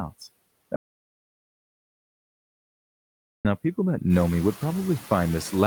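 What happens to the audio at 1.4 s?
At 1.4 s the audio has dropped out to silence. The gap runs from 0.76 s to 3.45 s, so about 2.69 s of sound is missing. The cut is abrupt at both ends. Inside it there is silence, with no room tone at all. The likely cause is a lost input, such as a disconnected device or a failed link, while the recorder kept writing silence. Whatever was spoken in that stretch is gone.

Noise suppressor artifacts run through the whole clip, including the speech on either side of this gap. The suppressor pulls steady background noise down by about 20 dB, frame by frame. It does this band by band. So the noise drops away between words and comes back up underneath them. During the dropout itself there is nothing left for it to act on.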